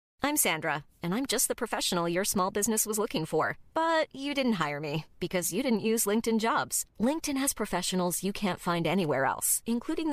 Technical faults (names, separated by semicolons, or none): none